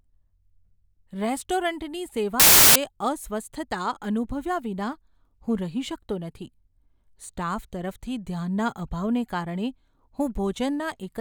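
Samples built from the wrong bytes hit this speech clip from 2.40 to 2.76 s, a burst of loud, harsh broadband noise about 0.36 s long. The bytes of each sample are misassembled, likely through a byte offset or swapped order, so the rapidly changing low bits dominate every value.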